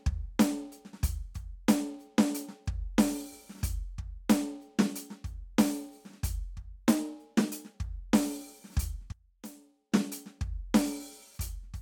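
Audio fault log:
6.67 to 7.74 s, drift correction step: the music suddenly runs about 5.6% fast and jumps up roughly 95 cents, close to a full semitone, then drops back to normal after about a second. Speed and pitch move together, so it sounds like the whole track got nudged sharp rather than retuned. The likely cause is clock-matching software bumping the playback rate in one go to top up or drain its buffer, then releasing it.
9.12 to 9.92 s, one channel inverted: for just under a second the music falls away by about 20 dB, with the centre of the mix mostly gone. With one side flipped in polarity, anything the two channels share cancels when they're combined to mono, leaving only their difference. Here that leftover is a faint trace of the track. The likely cause is a polarity reversal on one channel during that stretch.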